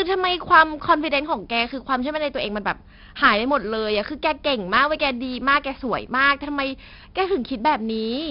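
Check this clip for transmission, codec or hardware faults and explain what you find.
One codec fault runs through the whole speech clip: 4-bit ADPCM compression, heavy, with nothing above 5.3 kHz. Each sample is coded as a coarse 4-bit step from a prediction, so the gritty hiss rides on the speech and rises and falls with it, which fits a bitrate around 44 kbps. That level-tracking grit, plus roughness on sharp onsets, distinguishes it from steady background hiss or the swirly artefacts of perceptual codecs.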